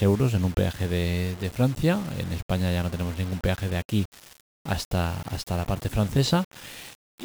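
From start to end the speech carries a grainy, gritty distortion that moves with the voice, roughening quiet passages most and making the softest tails break up or sputter rather than fade smoothly. The likely cause is low bit depth without dither: the audio appears to have been rounded to about 6 bits, so the rounding error tracks the signal instead of forming a steady hiss, sitting only about 20 dB below the speech.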